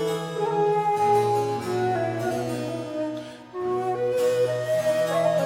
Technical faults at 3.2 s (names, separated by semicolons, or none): none